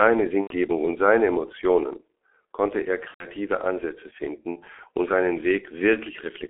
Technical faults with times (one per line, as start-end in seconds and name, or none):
0.00-6.49 G.723.1 codec
0.41-0.54 VoIP packet loss concealed by the speech codec
3.08-3.26 VoIP packet loss concealed by the speech codec